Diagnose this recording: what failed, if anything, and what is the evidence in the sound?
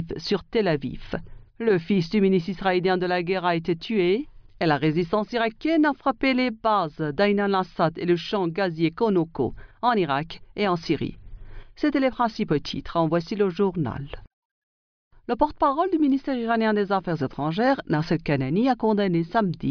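Nothing failed at any stage: the signal path from capture to playback holds steady, with no audible break, distortion or disturbance anywhere in the recording.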